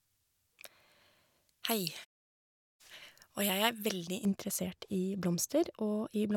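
From the start to 4.25 s, pre-emphasis is left on: the treble boost was never undone by the matching de-emphasis, which fits a J.17 curve. Highs sit about 11 dB above 1 kHz at 10 kHz, making the speech thin, bright and hissy on sibilants.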